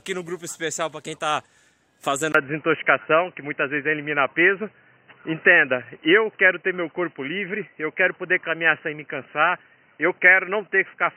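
At 2.32 s the sound drops out for about 20 ms, then comes back noticeably duller and boxier, and stays that way to the end. Nothing above 3 kHz gets through after that point, the level shifts by roughly 5 dB, and a new, faint noise floor sits well below the signal. That's the classic signature of the input switched to a poorer device, likely a fallback microphone or a headset's narrowband call profile.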